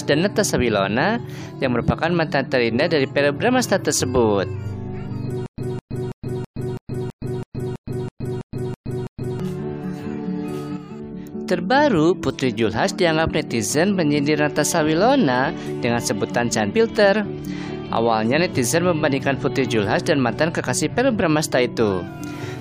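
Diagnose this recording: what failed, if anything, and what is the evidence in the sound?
Stutter with silent gaps, 5.46 to 9.40 s: one 209 ms burst repeats twelve times between 119 ms silences, likely a stalled playback buffer replaying its last fragment.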